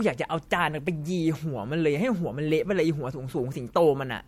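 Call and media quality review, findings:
Generation loss, whole clip: swirly, hollow speech with soft, smeared attacks and nothing above 16.5 kHz. Likely MP3 re-encoded about three times at around 64 kbit/s, each pass re-quantising on a shifted frame grid, so the artefacts stack.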